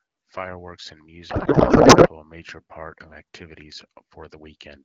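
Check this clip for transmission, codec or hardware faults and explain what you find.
One transmission fault stands out in the speech.

A codec payload misread runs from 1.29 to 2.08 s, ending just before "a major part of". Frames packed octet-aligned are being parsed as bandwidth-efficient AMR, so every field lands in the wrong place. The decoder turns them into garbled noise and warble that barely tracks the speech. The surrounding audio has the clean, lightly coded character of AMR wideband (HD Voice), consistent with a rate of about 12.65 kbit/s.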